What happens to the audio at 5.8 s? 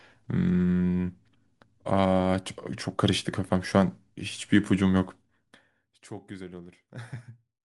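Zipper noise runs from 5.01 to 6.15 s, covering 5.8 s. The level falls by roughly 20 dB, but in unsmoothed steps, around a hundred per second, and each jump leaves a tiny click, so a fine ticking buzz rides on the speech as it fades.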